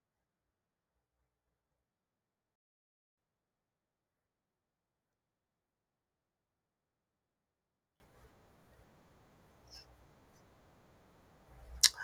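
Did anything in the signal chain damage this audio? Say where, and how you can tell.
Yes. There are two sudden gain jumps, most likely from a digital gain setting or bit shift applied without a ramp in the driver or sample-format stage. From 2.56 to 3.18 s the speech drops by about 24 dB, and from 8.0 s to the end it is about 24 dB louder. The background noise jumps with the speech, and each step is instantaneous. A speaker moving would change the level more gradually and leave the noise floor where it was, and an AGC would change the level more gradually.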